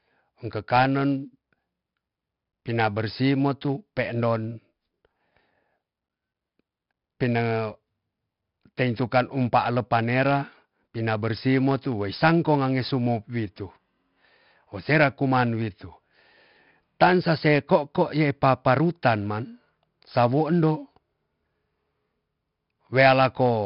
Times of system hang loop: none

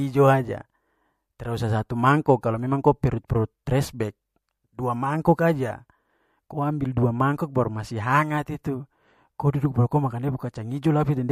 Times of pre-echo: 2.41-2.43, 3.27-3.30

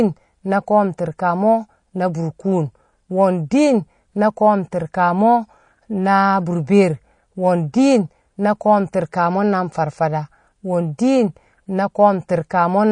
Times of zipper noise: none

